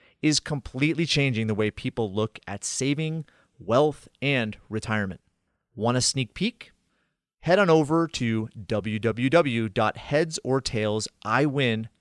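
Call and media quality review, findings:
No faults found in audio.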